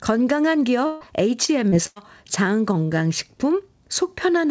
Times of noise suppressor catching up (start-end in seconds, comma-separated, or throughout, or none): none